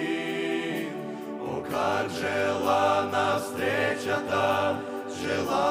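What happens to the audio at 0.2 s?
Nothing goes wrong at 0.2 s; the audio plays through that moment intact, with no dropout, click or distortion.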